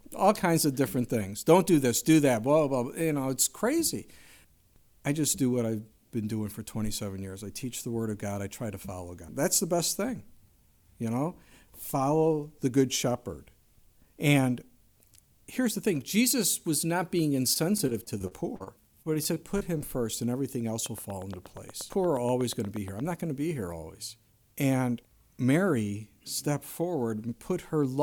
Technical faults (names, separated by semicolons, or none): repeated packet loss (robotic sound); train of clicks